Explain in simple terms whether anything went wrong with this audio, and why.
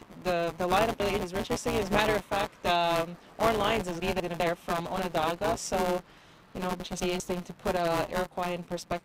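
Two separate problems here.

The first runs through the whole clip: buffer tearing. The software filling the audio buffer and the hardware playing it have drifted out of step, so they overlap partway through every cycle. About a fifth of each slice ends up being sound from roughly ten milliseconds earlier, with sharp joins on either side. That repeats 172 times a second, which fits a 256-sample buffer, and you hear it as a steady robotic buzz riding on top of the sound.

The second is chunks out of order, and it happens three times: 1.0 to 1.4 s, 4.0 to 4.4 s and 6.8 to 7.2 s. Each time, a 200-millisecond piece of audio showed up one slot late and played after the piece that should have followed it. Nothing actually goes missing, but the order gets swapped, so each spot sounds briefly jumbled and there are three hard joins where the pieces butt together.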